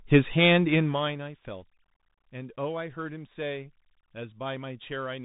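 Bluetooth CVSD headset codec damage runs through the whole speech clip: plainly audible, with nothing above 3.8 kHz. One-bit up-or-down coding with an adapting step, which fits a 64 kbps link, leaves granular hiss, scratchy s sounds and distortion wherever loud high content outruns the step.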